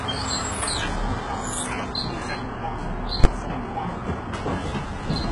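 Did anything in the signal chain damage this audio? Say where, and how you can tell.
Yes. Throughout, the treble sounds rebuilt rather than recorded: heavy codec damage, gritty, metallic upper bands that don't line up with the body of the sound, and nothing above 15.2 kHz. That points to HE-AAC compression, likely at a very low bitrate near 12 kbps, with spectral band replication copying lower bands upward.

At 3.24 s a single hard bang lasting about 12 ms marks invalid numbers at full scale. A processing calculation produced infinite or invalid values that were clamped to maximum output for one block, which fits a 512-sample block.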